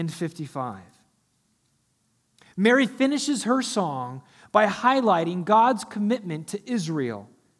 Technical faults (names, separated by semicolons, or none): none